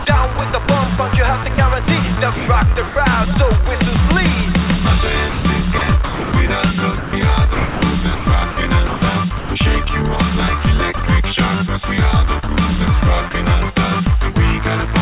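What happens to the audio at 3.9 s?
Nothing goes wrong at 3.9 s. The audio carries on intact through that moment, with only the narrow, telephone-like band of the call path, which leaves nothing above 4 kHz.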